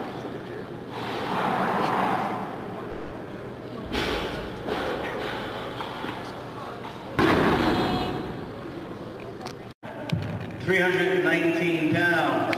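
At 2.91 s the sound stalls until 3.27 s. This is a call audio freeze. The likely cause is packets held up in transit, so the jitter buffer ran dry. The receiver carried the last sound on as a fading buzz or hiss for about 200 ms. It never drops to silence. When the packets arrive, the audio resumes where it stopped. Nothing is lost, but a gap has been inserted, and everything after runs about 200 ms later.

From 8.52 s to 10.39 s the audio is hurried. This is a jitter buffer speed-up. The buffer was holding more than its target. To shed the extra delay, the receiver cut out short pitch-period slices, one after another. Playback runs at about 111% of normal speed. The pitch stays the same. Across this stretch roughly a fifth of a second of audio is trimmed away.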